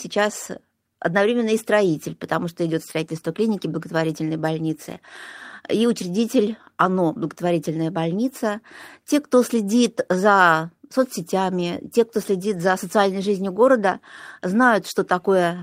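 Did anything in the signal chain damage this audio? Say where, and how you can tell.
Yes, at the network and codec stage: lost packets rebuilt from error correction at 4.85 to 4.91 s and 12.53 to 12.75 s. There's no gap, just rougher, noisier stretches of about 40 ms and 120 ms, which fits two and six lost packets replaced by the low-bitrate copies carried in the following packets.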